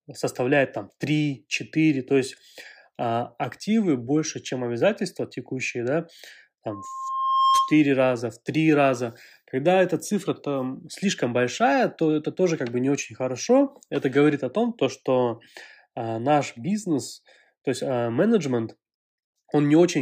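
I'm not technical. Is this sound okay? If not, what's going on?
No, there's one problem. From about 6.69 to 7.81 seconds you get a loudspeaker feedback squeal: a steady tone around 1.1 kHz that swells up over roughly the first half to three-quarters of a second until it's louder than the speech itself, then cuts off just before "раза в три раза". What's happening is the microphone is hearing its own loudspeaker, and that one pitch keeps feeding round the loop and growing on itself.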